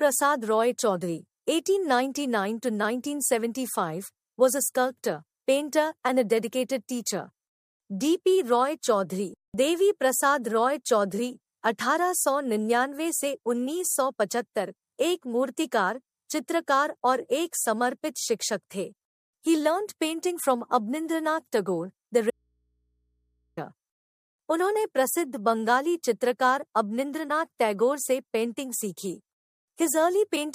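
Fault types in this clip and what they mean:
Audio dropout to a faint residue: From 22.30 to 23.57 s the sound cuts out abruptly, leaving only mains hum far below normal level. Likely a lost signal with a live input.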